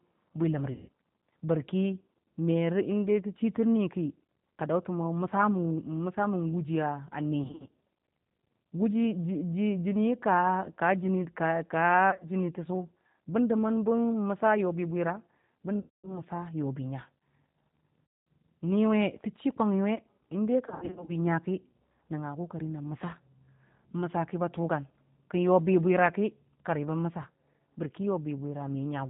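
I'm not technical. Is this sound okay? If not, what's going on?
No, there are two problems. The whole recording went through a G.729 codec, the heavily squeezed format many internet phone systems use. It keeps only the lower part of the voice, so everything sounds muffled, slightly rough and a bit artificial, like a cheap phone line. This is a steady, even quality, not something that comes and goes, which sets it apart from the second problem.

That second problem is VoIP packet loss concealed by the speech codec. Pieces of the call went missing in transit, and the phone software filled each gap by guessing from the last bit of voice it had. You hear it as a brief buzzy, smeared or fading sound instead of clean speech, and the voice stays weak for a moment afterwards. It happens right after "bwi ləm" at 0.72 to 0.89 seconds, then at 7.44 to 7.74, 12.10 to 12.25, 15.79 to 16.20, 18.04 to 18.27 and 20.67 to 21.17 seconds. 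At 7.44, 12.10 and 20.67 the gaps are broken into several short stutters rather than one dropout.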